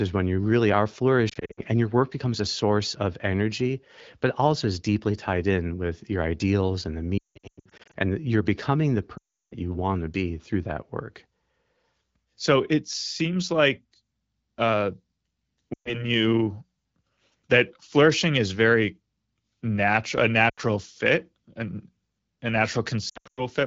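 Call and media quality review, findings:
Lost AMR speech frames, six spots: 1.29–1.60 s (after "when you really are"), 7.18–7.95 s (after "your ideals and the"), 9.17–9.55 s (before "you want to be"), 15.73–16.03 s, 20.49–20.60 s, and 23.09–23.42 s. The decoder repeats the last good pitch and tract settings with falling gain, so you hear warbles and sound dropping quickly toward near silence. The worst stretch is near 7.2–7.95 s, where a run of about 0.18 s fades toward silence. The probable cause is radio-side frame errors, and the clear wideband HD Voice band between dropouts points to AMR-WB.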